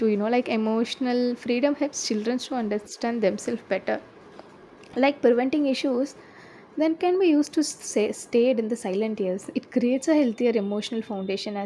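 A speech recording with no audible technical faults.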